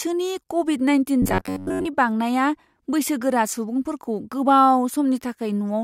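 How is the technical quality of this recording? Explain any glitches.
The recording has one clear fault in this speech clip: robotic sound from repeated short buffers, from 1.22 s to 1.87 s, between "क'विड नाइनटिन" and "बांनाया बैसोगोरा सुबुंफोरखौ". For about 0.65 s the voice becomes a rigid, metallic buzz pitched near 93.8 Hz that only loosely tracks the syllables. The likely cause is audio arriving too slowly, with the playback repeating a fragment of roughly 10.7 ms for most of that stretch while the real signal is skipped.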